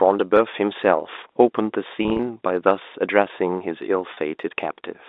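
Packet loss with pitch repetition occurs twice. From 2.03 to 2.19 s, 90 ms went missing in runs of up to 30 ms. At 4.14 s a single 30 ms gap occurs. Each gap is bridged by repeating the last pitch period, so the speech briefly holds on a buzzy note.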